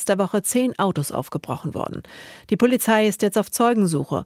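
Nothing stood out as a technical fault on listening to this speech recording.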